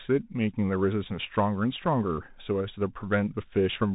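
A speech recording carrying the Bluetooth CVSD headset codec from start to finish, with plainly audible damage. The band stops at about 3.8 kHz, so a spectrogram shows a hard ceiling with empty space above it. CVSD codes the signal as one-bit up/down steps at 64 kHz with an adaptive step size, which fits a 64 kbps CVSD stream. Loud high content outruns that step and distorts, s sounds turn scratchy, and a granular hiss sits under the speech, visible as a grainy noise floor between words and a jagged, stair-stepped waveform.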